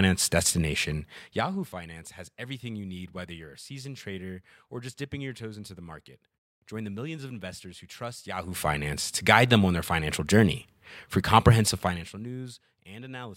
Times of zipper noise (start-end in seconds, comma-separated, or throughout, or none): 0.96-1.80, 8.28-8.68, 11.80-12.28